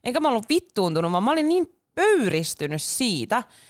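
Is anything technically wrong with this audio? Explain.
No, there is nothing technically wrong to be heard in this speech recording. No fault turns up at any point in the audio.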